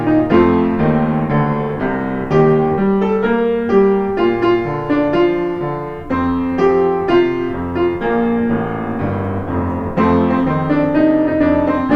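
No faults are audible anywhere in the audio.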